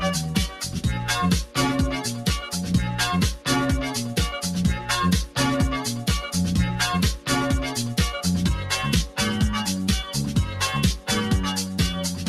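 A short stretch of sound is cut by the noise suppressor between 0.49 and 0.81 s, sinking by up to about 6 dB for roughly a third of a second. The suppressor mistook this material for background noise and attenuated it more than its surroundings. It differs from a dropout, which leaves silence or a hard gap: here the sound stays audible, just quieter, then returns to full level as the suppressor lets go.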